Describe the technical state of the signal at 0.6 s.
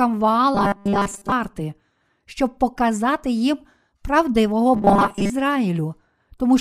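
At 0.6 s the speech has robotic sound from repeated short buffers, 0.55 to 1.32 s: a fixed 200 Hz metallic buzz, likely from re-played 5 ms fragments replacing roughly 70% of the audio.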